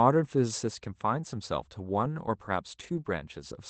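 Speech carried over an Opus call path with audio limited to about 8 kHz, showing a lost packet rebuilt from error correction twice: briefly at 1.93–1.95 s, and longer at 2.79–2.97 s, where about 100 ms of rebuilt audio fits roughly five lost 20 ms packets. The decoder played the rougher low-bitrate backup copies, so the waveform shows no gap. On a spectrogram those stretches look grainier and smeared, with hazier harmonics and extra noise between them.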